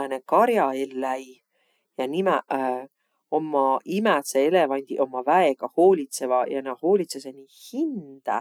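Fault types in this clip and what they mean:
No faults detected in the recording chain; nothing to report.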